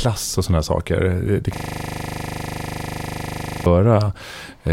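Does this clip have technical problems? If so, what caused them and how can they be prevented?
Yes. A system hang loop occurred from 1.56 to 3.66 s. The computer or driver froze while the hardware replayed one 40 ms buffer, producing a steady 25 Hz buzz. To prevent it, give the audio thread real-time priority and use stable, up-to-date drivers.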